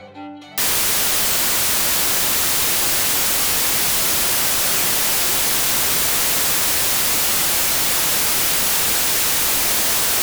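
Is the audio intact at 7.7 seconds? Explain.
No. At 7.7 seconds the audio sits inside a wrong sample width fault running from 0.58 s to the end. Packed 24-bit samples are being read as 32-bit, so each value straddles mismatched bytes. It plays as loud noise with the original buried, running about 1.33 times fast and high in pitch. On a spectrogram it shows as broadband noise smeared across all frequencies. The waveform is dense.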